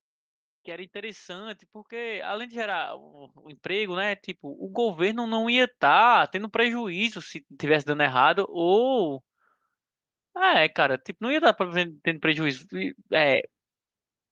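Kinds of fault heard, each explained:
Automatic gain rising: the level control on the input decided things were too quiet and kept nudging its gain up, so from about 0.65 s to 5.74 s the whole speech clip slowly swells by about 18 dB. You can hear the voice and the room noise behind it climbing together over those five seconds or so, which tells you it's the gain stage moving rather than the talker getting louder.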